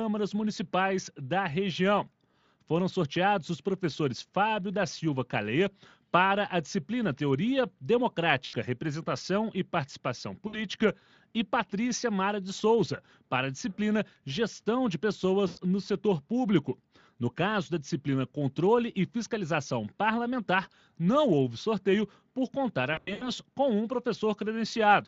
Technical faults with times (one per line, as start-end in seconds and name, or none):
2.31-2.34 VoIP packet loss concealed by the speech codec
8.45-8.57 VoIP packet loss concealed by the speech codec
10.47-10.61 VoIP packet loss concealed by the speech codec
15.47-15.59 VoIP packet loss concealed by the speech codec
22.93-23.29 VoIP packet loss concealed by the speech codec